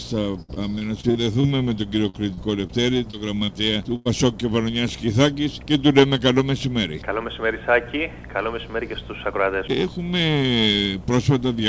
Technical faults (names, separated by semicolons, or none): repeated packet loss (robotic sound); short concealed packet loss; burst of packet loss